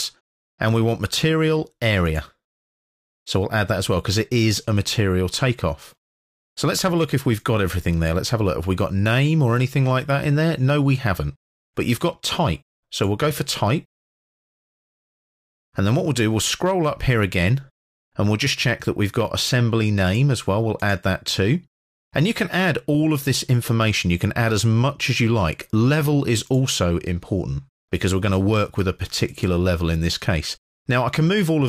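No technical faults are audible in this audio.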